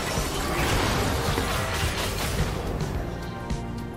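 No technical faults are audible in this recording.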